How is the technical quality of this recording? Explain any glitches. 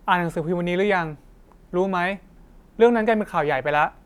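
Listening to the recording, nothing in its technical quality stood out as a glitch.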